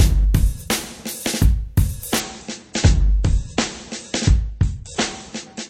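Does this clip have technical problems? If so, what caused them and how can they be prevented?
Yes: an adaptive stream switched to a lower bitrate from 2.2 s to the end at 5.7 s, which fits a drop from 128 to 32 kbit/s MP3, so treble vanishes above 8.4 kHz and artefacts rise without any gap. A larger playback buffer and a steadier connection would keep the stream on its higher bitrate.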